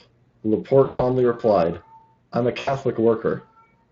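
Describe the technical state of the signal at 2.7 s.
At 2.7 s you're inside a patch of VoIP packet loss concealed by the speech codec, running from about 2.59 to 2.75 s, right after "replied I'm a". Roughly 80 ms of audio went missing, which fits four 20 ms frames, so the Speex decoder kept extrapolating from its last pitch and filter while pulling the gain down. The result is a smeared, fading stretch of buzzy tone or coloured noise that stays thin for a bit after real packets resume, sitting on top of the light Speex coding.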